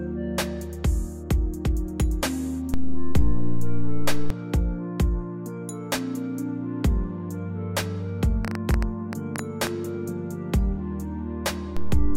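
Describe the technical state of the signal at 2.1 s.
At 2.1 s the signal is intact, with no fault audible at that moment.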